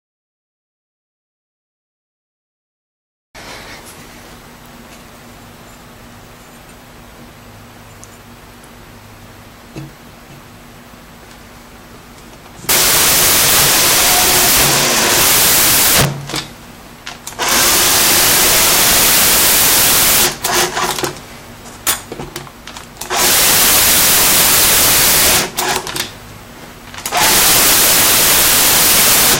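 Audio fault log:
12.69–16.36 s, 17.42–21.05 s, 21.87–21.91 s, 22.36 s, 23.02–26.00 s and 27.06–29.36 s: integer overflow. Loud peaks driven about 0 to 24 dB past full scale wrap to the opposite sign instead of being limited, giving violent cracks sharper than clipping. The waveform shows full-range vertical flips, and the spectrogram shows broadband vertical streaks.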